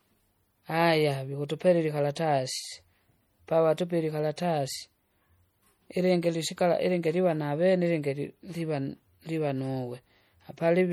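A speech recording, with low-bitrate audio saved at a high bitrate across the whole clip: the sound carries the smeared, swirly coding artefacts of heavy MP3 compression, which fits a 48 kbit/s encode, likely re-saved as a 192 kbit/s MP3 that cannot restore the lost detail, with nothing above 21 kHz.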